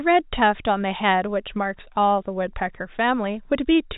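Nothing goes wrong anywhere in this speech; it simply carries the usual narrow telephone sound of G.711 coding, with nothing above about 3.8 kHz and only the faint, level-following grain that format always leaves.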